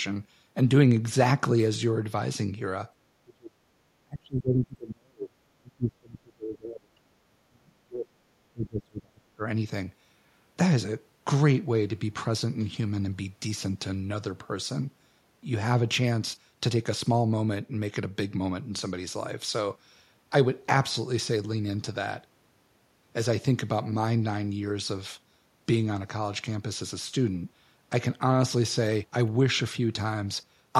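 Speech with speech suppressed in double talk at 3.24–3.6 s, 4.03–5.37 s, 5.57–8.21 s and 8.51–9.42 s, where the talker's level drops by up to about 40 dB. The likely cause is an echo canceller attenuating everything because it couldn't separate local speech from far-end echo.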